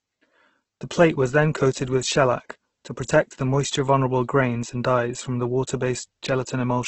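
Throughout the speech, everything above 8.2 kHz is gone, and the remaining band sounds rough and grainy, with tonal parts turned noisy. This is heavy damage from Opus compression, likely in its CELT music mode at a low rate near 12 kbps, filling starved bands with noise.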